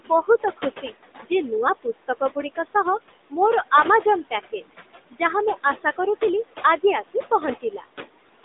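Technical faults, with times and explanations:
Throughout: noise suppressor artifacts. The room noise sits about 13 dB below the speech, and the suppressor pulls it down by about 16 dB wherever it judges a band to hold only steady noise. It makes that call frame by frame. The background therefore sinks in the pauses and comes back up under the speech. All of this happens within a narrow phone band of roughly 250 Hz to 3.7 kHz, with nothing above 3.8 kHz.
0.00 to 1.31 s and 4.03 to 4.72 s: speech cut by the noise suppressor. In these spans the suppressor mistakes parts of the speech for noise and turns them down with the background. The first span ends just before "ଯେ ନୂଆ". It loses about a third of a second of sound in total, dipping by up to about 18 dB. The second loses about a tenth of a second, dipping by up to about 10 dB. The affected sounds come across swallowed and faint.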